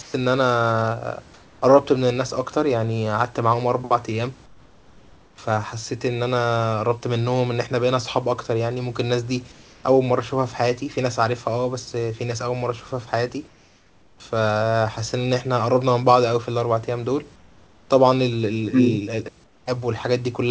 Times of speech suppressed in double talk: none

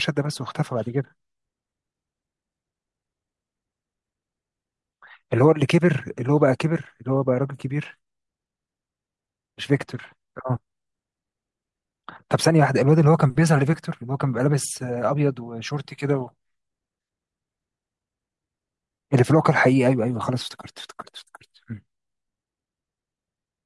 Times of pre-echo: none

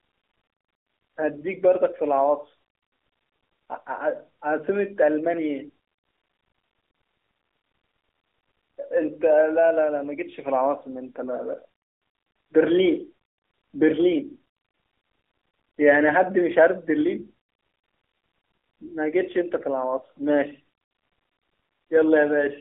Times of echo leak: none

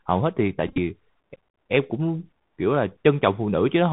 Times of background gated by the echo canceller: none

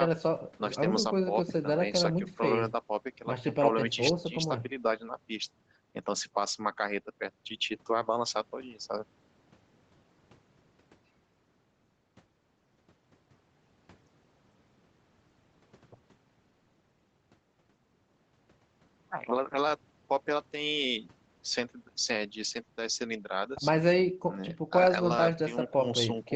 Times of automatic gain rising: none

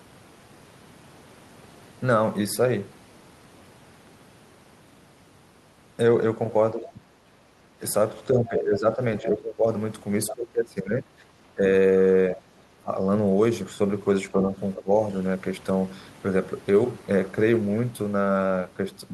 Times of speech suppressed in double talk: 6.74-7.05, 8.34-9.66, 10.31-11.63, 12.36-12.91, 14.32-14.90

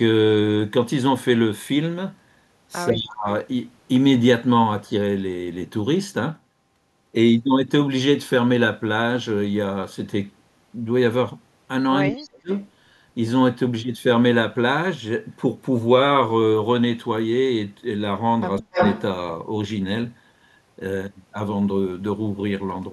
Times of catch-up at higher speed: none

